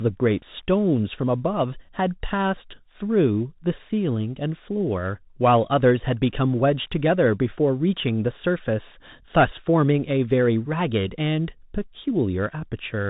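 Bluetooth CVSD headset codec damage runs through the whole speech clip: each sample is coded as a single up-or-down bit, which fits a 64 kbps stream, with an adapting step. The band stops near 4 kHz, loud high sounds outrun the step and distort, s sounds turn scratchy, and granular hiss sits underneath.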